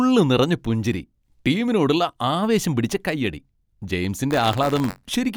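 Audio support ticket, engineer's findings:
Robotic buzz on the speech, 4.30 to 5.11 s, about 94 Hz, only while signal present. Buffer tearing in output ring buffer: writer and reader slipped, cross each period; small slice replays audio roughly 30 ms old. Rate fits 512-sample buffer.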